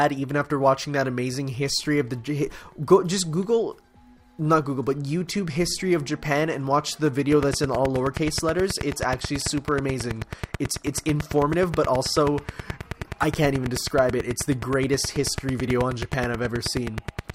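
From 7.32 s to 17.31 s a train of clicks runs steadily at 9.3 per second, about a hundred near-identical pulses peaking roughly 10 dB above the sound, likely interference or a faulty connection. Unlike random crackle, the ticking is evenly spaced and persists through pauses.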